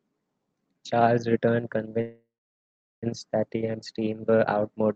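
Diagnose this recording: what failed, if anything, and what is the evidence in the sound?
The network delivery on this call failed, with the jitter buffer involved at each step. At 2.01 s the speech stops and a fading continuation of the last sound stands in for it, dying into silence that makes up about 750 ms of a roughly 1.01 s hold. At 3.04 s the speech resumes exactly where it left off, with nothing lost. That is a call audio freeze, most likely from packets stalled in transit and an empty jitter buffer, which ended up adding about a second of delay.

Right after that comes a skip ahead, at 3.48 s. Playback jumps forward with only a tiny join of about 4 ms, and roughly 0.7 s of speech is simply gone, spliced nearly end to end. That's likely the buffer dumping its backlog once the delayed packets landed. It threw away around 700 ms of audio to claw back the latency it had just built up.

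From 3.57 to 4.88 s there's a jitter buffer slow-down. The speech runs at about 90% speed, though the pitch stays put, so sounds come out stretched. The receiver was repeating single pitch periods to rebuild its reserve after the skip, and it added about 145 ms in total. Underneath all of this, the Opus call path sounds normal. Its top end stops around 8 kHz, which fits a wideband-limited call setting.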